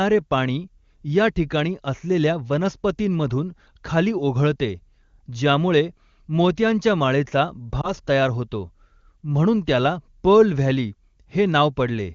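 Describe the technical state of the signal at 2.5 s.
At 2.5 s the speech is intact, carried through the AMR wideband (HD Voice) codec at 23.85 kbit/s with at most faint coding damage.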